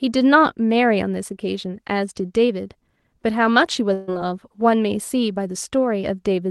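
From 3.93 to 4.09 s, a burst of packet loss drops about 140 ms of audio. The receiver stretches the last sound and fades it down, giving a held buzz or a dying hiss. The speech then resumes with that stretch gone.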